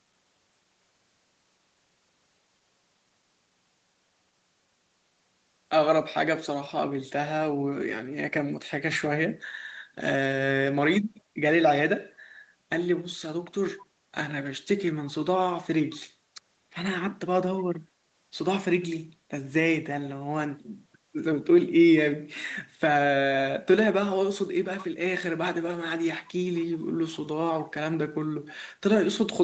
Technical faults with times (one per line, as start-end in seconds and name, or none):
13.77-13.83 echo leak
14.94-15.12 echo leak
15.95-16.02 echo leak
26.55-26.78 echo leak
27.13-27.17 echo leak